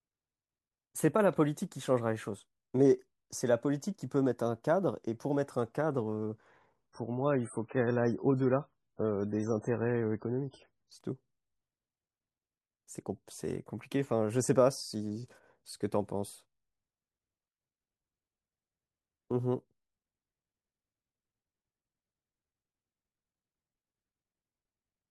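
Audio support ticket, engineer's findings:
Adaptive stream at a lower bitrate, 6.91–10.91 s: sudden, gapless drop in quality, nothing above 10.3 kHz. The player switched to a lower-bitrate version, consistent with MP3 falling from 128 to 16 kbit/s.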